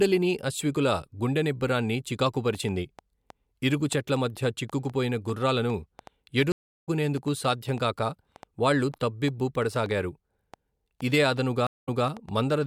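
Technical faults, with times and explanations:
2.55–12.55 s: train of clicks, about 40 irregular ticks near 4 per second, peaking about 5 dB above the speech, likely interference from nearby equipment, audible through pauses too.
6.52–6.89 s: stream reconnect, 341 ms of silence, then speech resumes roughly 300 ms further on, skipped ahead rather than merely gapped, as a fresh decoder picks up a live feed.
11.67–12.07 s: stream reconnect, 191 ms of silence, then 209 ms of speech replayed as the server resends a burst, a repeat that sets it apart from a plain dropout.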